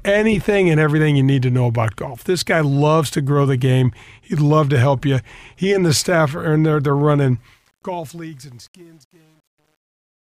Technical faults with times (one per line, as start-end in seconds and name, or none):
7.38-10.37 truncation distortion on a fade